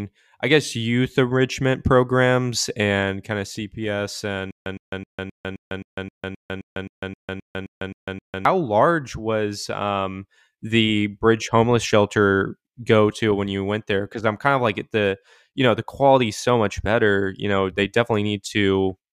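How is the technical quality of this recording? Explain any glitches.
There's one real glitch: a stutter with silent gaps from about 4.51 to 8.45 s. A short 114 ms snippet of the speech repeats 15 times, each followed by roughly 149 ms of dead digital silence, so it pulses at a steady 263 ms rhythm. The likely cause is a stalled player or stream that replays its last fragment on each retry and then runs dry. Whatever speech belonged in those four seconds is simply gone.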